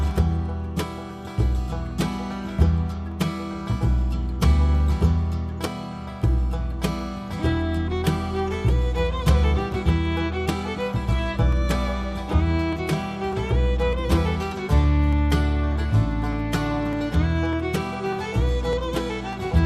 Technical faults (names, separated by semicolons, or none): clock drift buffer slips